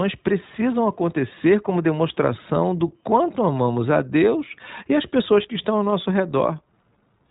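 From start to finish the speech has passed through the iLBC codec, with a rate that points to its 15.2 kbps, 20 ms frame mode. Nothing above 3.8 kHz survives, so the sound is muffled and narrowband, and the coarse excitation coding makes it plainly rough and synthetic.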